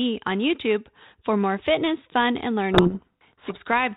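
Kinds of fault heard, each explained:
Codec payload misread: from about 2.72 to 3.59 s, right after "more fitness fun and", the decoder reads the G.726 code words with their bits in the wrong order, so the speech gets buried under harsh, gritty distortion until both ends agree again.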